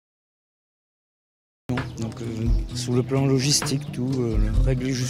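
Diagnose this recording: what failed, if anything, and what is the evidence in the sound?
The stage is capture start at the driver or buffer: a cut-off start. The audio holds digital silence until 1.69 s, then enters abruptly mid-sound with no attack. A natural pause would carry room noise and a rising onset; this jumps straight from silence.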